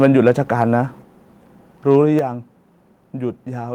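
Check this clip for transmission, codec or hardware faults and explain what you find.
Two kinds of fault are audible in this speech: clipping at the very start and two sudden drops in microphone level later on.

Microphone overload, from 0.0 to 0.31 s: the peaks sound flattened, likely because the input gain was set about 3 dB too high for the converter, so the tops of a small fraction of the waveform were sheared off. The result is a harsh, crackly edge on the loudest opening syllables.

Microphone volume stepped down, at 1.02 s and again at 2.19 s: the call software appears to have reacted to the hot input by lowering the device gain in single steps, about 4 dB and then about 6 dB. Voice and background fall in level abruptly at each point, with no gradual fade.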